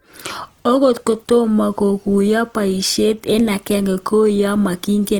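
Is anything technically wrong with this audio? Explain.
Yes. Throughout the speech, likely Opus compression: its music mode fills starved bands with folded or noise energy, making tones grainy and rough. A spectrogram shows smeared, noisy bands reaching about 20.2 kHz, with few holes.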